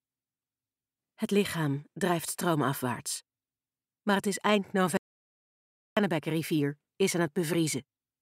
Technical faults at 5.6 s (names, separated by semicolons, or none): audio dropout to silence